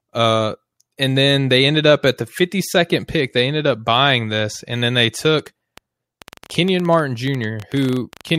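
From 5.39 s to 8.36 s, a train of clicks runs under the speech. Around thirty similar pulses arrive unevenly, about 11.2 per second. They peak near 5 dB above the speech and tick through pauses too. Nearby equipment interference is the likely source.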